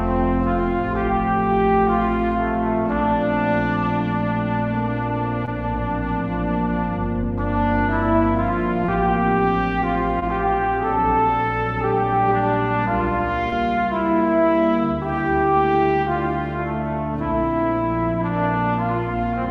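Brief smears or wobbles, each about 40 ms long, interrupt the sound at 5.45, 8.86, 10.20 and 13.50 s. These are short concealed packet losses. Each time, about 20 ms of audio arrived too late, and the receiver extended the preceding sound to cover the gap before blending back.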